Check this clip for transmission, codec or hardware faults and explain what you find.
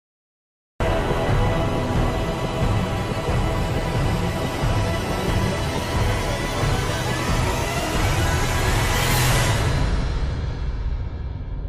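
There's one fault: a cut-off start. From 0 to 0.80 s there's pure digital silence, then the audio jumps straight into a sound already in progress. Capture evidently began late, so there's no natural attack or fade-in, just an abrupt entry mid-sound.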